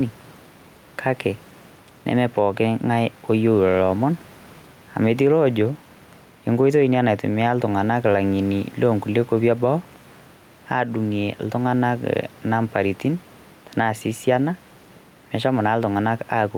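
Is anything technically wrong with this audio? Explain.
Yes. Gain pumping runs throughout the clip. The input gain is likely set far too high, so a fast limiter clamps down on every loud syllable. The room noise sits about 32 dB below the speech, and the gain swings by roughly 5 dB, leaving the speech squashed.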